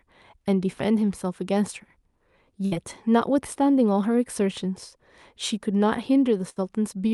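Twice in this speech recording, a burst of packet loss leaves the receiver with nothing to play, so it extends the last sound and fades it out. At 2.65 to 2.74 s, about 60 ms is concealed this way and about 60 ms of speech is gone. At 6.49 to 6.64 s, about 66 ms is filled and again about 60 ms is lost. Each gap sounds like a brief held buzz or fading hiss before the speech resumes further along.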